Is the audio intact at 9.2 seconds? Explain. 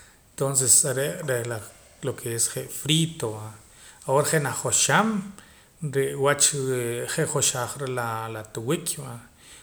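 Yes, the speech is intact at 9.2 seconds, with no audible fault at that moment.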